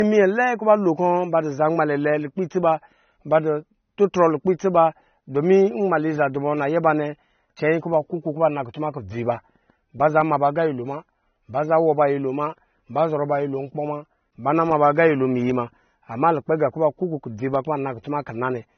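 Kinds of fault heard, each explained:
Low-bitrate audio saved at a high bitrate: the speech sounds dull throughout, with nothing at all above about 6.3 kHz and the artefacts of the first encoding still present. These are the marks of a heavy first encoding, one that fits a low-bitrate AAC stage. The likely cause is that this was re-encoded as a generous MP3, which enlarges the file but cannot restore the missing top end or remove the artefacts.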